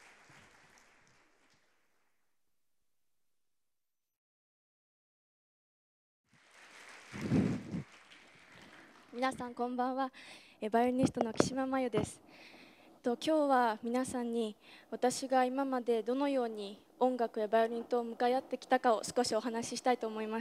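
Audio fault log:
No fault can be heard anywhere in this clip. There is nothing here to log.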